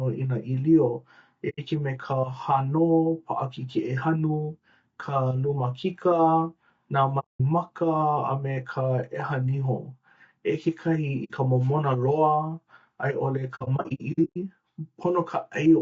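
The speech has a rough, grainy texture the whole way through, with noise filling the gaps between harmonics and a thin, synthetic top end. That's likely low-delay AAC compression, AAC-ELD style, squeezed to a bitrate around 32 kbps, where too few bits are left to code the spectrum cleanly.

Then there's AAC frame loss with muting: soft-edged holes where the sound fades out and back in, from 1.49 to 1.59 s, 7.19 to 7.40 s and 11.24 to 11.32 s. From 13.55 to 14.37 s the losses come in a scattered cluster totalling 420 ms, with the longest gap about a tenth of a second.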